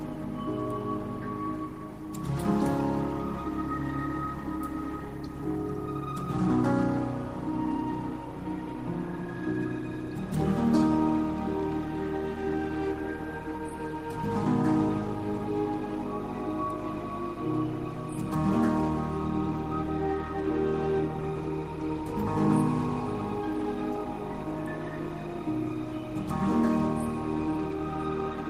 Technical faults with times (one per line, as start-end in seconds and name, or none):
none